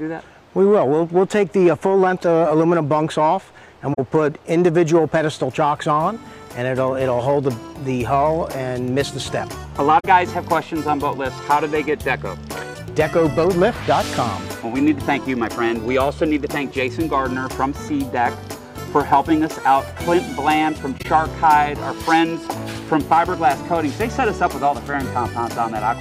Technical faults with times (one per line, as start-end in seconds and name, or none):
3.93-3.99 corrupt frame concealed
9.99-10.05 corrupt frame concealed
20.98-21.06 corrupt frame concealed